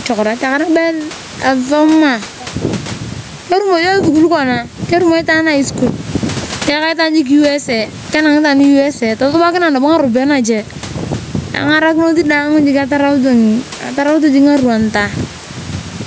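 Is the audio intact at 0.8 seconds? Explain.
No. Gain pumping runs through the whole clip, including 0.8 s. Gain set far too high, likely held back by a fast limiter, swings around 15 dB, so loud and soft parts end up closer in level. The waveform looks squashed, and the spectrogram's noise floor brightens and dims.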